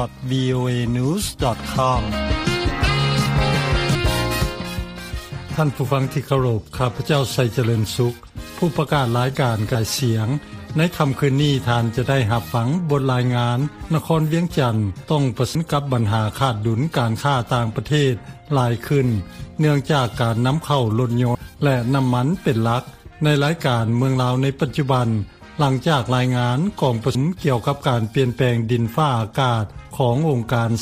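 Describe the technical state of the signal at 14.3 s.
At 14.3 s the signal is intact, with no audible fault at that moment.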